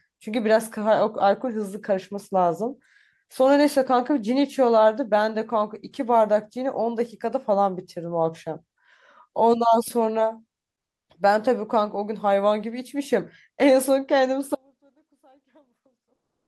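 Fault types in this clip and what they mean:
Comfort noise in place of the background: from 10.79 to 11.09 s, about 300 ms of the real background gives way to a steady, featureless noise about 24 dB quieter, likely from Opus discontinuous transmission pausing and the receiver filling the gap with synthetic noise.
Audio dropout to a faint residue: at 14.55 s the sound cuts out abruptly and stays gone to the end, leaving only a faint residue about 35 dB below the normal level, likely a lost signal while the path after the break stayed live.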